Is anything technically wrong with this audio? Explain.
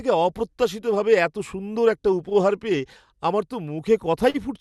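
Yes, there are two short stalls from a late packet, at 2.29 to 2.33 s, right after "অপ্রত্যাশিতভাবে এত সুন্দর একটা", and at 4.30 to 4.36 s. Each time a packet arrived late and the jitter buffer ran dry, so the receiver stretched the last sound, by about 15 ms and then 43 ms, before picking up where it left off. Nothing is lost, but the sound hangs briefly with a faint buzzy dip. The audio came through a call codec whose top end stops around 12 kHz, which fits Opus at a moderate bitrate.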